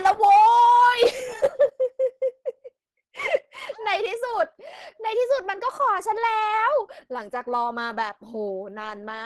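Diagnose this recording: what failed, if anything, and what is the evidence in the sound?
Throughout, the speech sounds hoarse and grainy, with nothing above 12.1 kHz. This points to the codec stage, likely Opus compression in hybrid mode at around 16 kbps.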